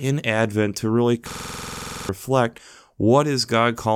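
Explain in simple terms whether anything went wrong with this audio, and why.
From 1.3 to 2.09 s the speech suddenly turns into a rapid, machine-gun-like stutter: one tiny scrap of sound, about 46 ms long, plays back 17 times in a row at about 21.5 repeats per second. This is a system hang loop. The computer froze while the sound hardware kept replaying the same small memory buffer, which fits a 2048-sample buffer. Most of a second of the real audio is lost.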